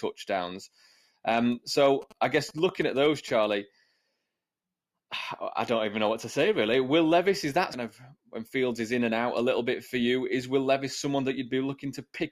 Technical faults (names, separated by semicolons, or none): GSM signalling bursts; stream segment skipped